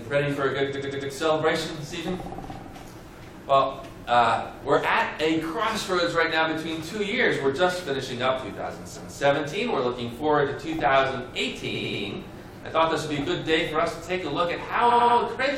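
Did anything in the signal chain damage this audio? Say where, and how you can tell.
Yes. The damage is in the compressed stream, where repeated frames were written or delivered more than once. At 0.70 s a 93 ms block plays four extra times, at 4.23 s a 46 ms block repeats once, at 8.92 s a 232 ms block repeats once, and at 11.71 s and 14.86 s a 93 ms block plays three extra times. Each is heard as a stutter. The block sizes, all multiples of roughly 46 ms, point to whole codec frames being duplicated before decoding, and each stutter lengthens the audio by the repeated time.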